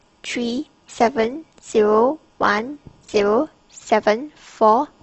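From 0 to 3.53 s the speech plays as an adaptive stream starting at a low bitrate. The treble is missing or synthetic and codec artefacts are strong, which fits Opus near 16 kbit/s. At 3.53 s quality jumps abruptly, without a gap, consistent with 64 kbit/s.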